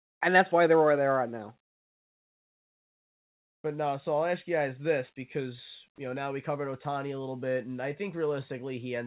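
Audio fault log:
5.96–5.98 s, sound dropped by the voice detector: between "you guys this because" and "you know now we", 20 ms becomes steady comfort noise, likely because the detector took the sound there for background. The waveform shows a brief flat, low-level patch, and the spectrogram a featureless slice within the 4 kHz call band.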